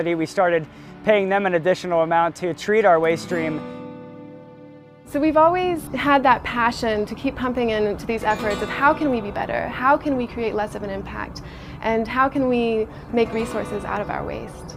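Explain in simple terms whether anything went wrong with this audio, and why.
Nothing went wrong with this audio, so there's no problem to explain.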